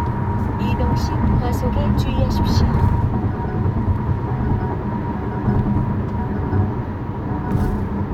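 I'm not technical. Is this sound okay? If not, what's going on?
Yes, this sound is okay, and nothing is going wrong with it.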